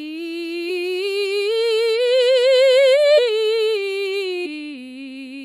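A piece of music with three short glitches at 0.69 s, 3.17 to 3.19 s and 4.45 to 4.47 s, caused by damaged data in a compressed stream that knocked the decoder out of frame sync.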